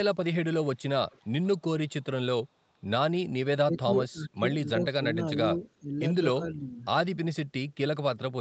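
At 0.79 to 0.83 s and again from 1.09 to 1.48 s, an echo leak comes through. It is a faint copy of the far side, delayed by 350 ms. It sits about 40 dB, then about 30 dB, below the speech. The likely cause is a loudspeaker echo the canceller failed to remove.

From 3.64 to 4.44 s, at 5.79 to 5.94 s, and from 6.39 to 6.85 s, the speech is suppressed in double talk. The level dips by up to about 20, 15 and 10 dB. Both sides likely spoke at once, and the canceller turned the talker down.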